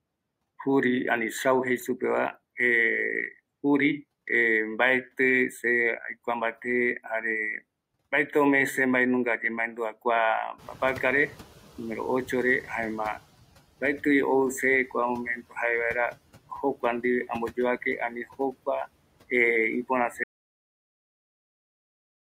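At about 10.5 s the room noise jumps by about 17 dB. From 10.58 to 13.24 s the noise suppressor is catching up. Its noise estimate lags the rise, so the noise passes with less reduction at first. Over 2.66 s it sinks by about 12 dB.

From 20.24 s to the end there is an audio dropout to silence. The speech stops mid-flow. The gap is silent, with no room tone. Whatever was said there is gone. The input was likely lost through a disconnected device or failed link.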